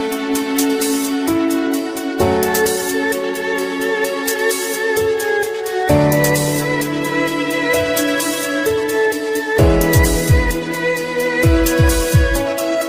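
No technical faults are audible anywhere in the clip.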